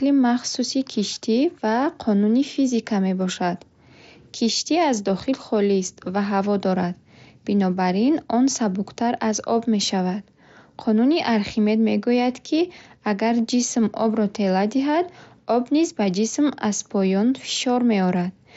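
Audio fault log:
No fault found in this audio.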